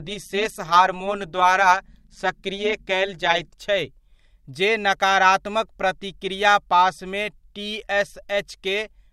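A speech recording carries overlap-add ripple from the start to 3.53 s: its level pulses by about 11 dB around 200 times a second, giving a metallic buzz with extra tones around each note. The audio was split into windowed frames and rejoined with an overlap whose gains don't sum evenly, so loudness dips once per frame. Unlike a mains hum or buzz, nothing is added alongside the sound. The sound itself is chopped, and the buzz vanishes wherever the audio falls silent.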